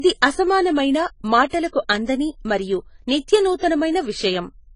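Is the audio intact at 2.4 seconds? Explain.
No. At 2.4 s, as throughout the speech, the sound is dull and smeared, with fizzy, warbling sibilants, likely from AAC compression, which fits AAC-LC at a starved bitrate near 24 kbps. The codec drops and noise-fills high bands frame by frame, so unlike a steady low-pass filter, the top end flickers rather than simply vanishing.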